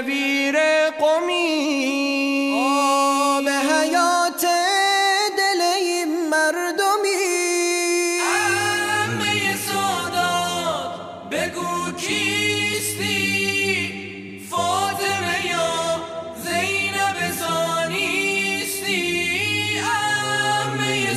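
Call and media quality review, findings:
Repeated frames, 14.28–14.36 s: stutter as a 78.4 ms block of audio plays a second time, which fits a run of three compressed frames written or sent twice. Probable component: encoder output or transport layer. Adds 78.4 ms to the audio.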